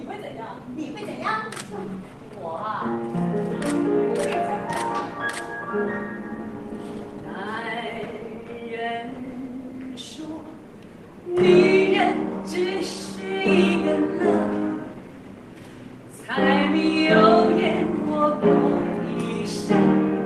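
Throughout the clip there is clock drift between sender and receiver: the sender's clock runs roughly 4 percent fast, so the receiver's jitter buffer keeps filling. Unlike jitter or packet loss, the disturbances here come from a steady rate mismatch rather than random network delay.

From 0.13 s to 20.24 s the receiver makes repeated timing corrections to keep up with that 104 percent pace. It cuts short pieces out of the sound, always in the same direction, at uneven intervals, heard as small hiccups or unsteady tempo rather than dropouts or a uniform speed-up.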